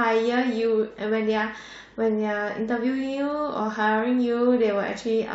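At 3.59 s the speech jumps forward, dropping roughly 70 ms of audio. These are compressed frames skipped: a few frames were missing or rejected by the decoder, which fits whole 23.2 ms frames vanishing.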